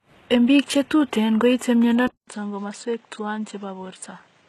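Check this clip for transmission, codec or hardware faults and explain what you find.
Two faults are present: one runs through the whole clip, and the other begins partway through.

Low-bitrate audio saved at a high bitrate, throughout: the speech carries nothing above 12.3 kHz, along with the leftover artefacts of the first encoding. This likely comes from an earlier very low-bitrate encoding, such as 16 kbit/s HE-AAC, that was re-saved as a 320 kbit/s MP3, which cannot restore what was discarded.

Input switched to a poorer device, from 2.07 s to the end: after a 200 ms gap, the speech turns duller and boxier, with nothing above 8.6 kHz. The level drops by about 5 dB, and a new, faint background noise appears. The recording apparently moved to a narrower-band microphone or headset profile.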